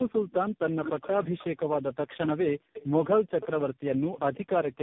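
Tandem speech coding runs throughout. The speech was coded and decoded about four times in a row, sounding rough, muffled and warbly, with nothing above 3.6 kHz.

Echo leak appears at 2.08 to 2.28 s, 2.73 to 2.88 s and 4.17 to 4.65 s. A copy trails 178 ms behind, about 10, 15, then 20 dB down, likely from an echo canceller missing loudspeaker pickup.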